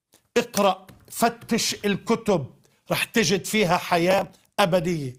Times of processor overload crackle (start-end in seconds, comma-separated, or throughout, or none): 4.11-4.37